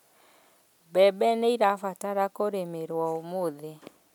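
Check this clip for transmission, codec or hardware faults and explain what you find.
Nothing wrong can be heard in this speech.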